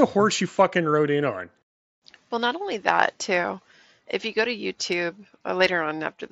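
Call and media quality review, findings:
No faults found; mSBC headset link nominal.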